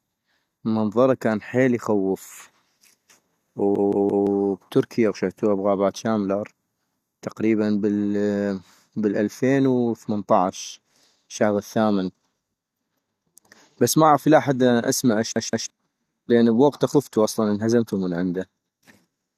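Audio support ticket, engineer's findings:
Repeated buffer, speech, 3.76–4.27 s and 15.36–15.70 s (after "لي حد الآن اسما"). Same 171 ms segment replays three extra times, then two, with hard joins, heard as a stutter. Output underrun: the device replayed its last buffer, which fits an 8192-sample buffer. Roughly half a second, then a third of a second, of audio lost.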